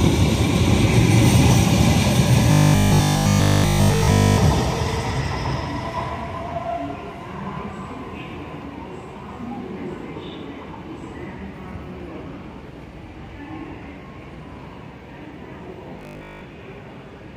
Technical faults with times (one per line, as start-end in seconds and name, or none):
2.52-4.38 robotic sound from repeated short buffers
15.99-16.41 robotic sound from repeated short buffers